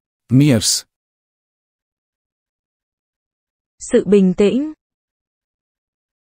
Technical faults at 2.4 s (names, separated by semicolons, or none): none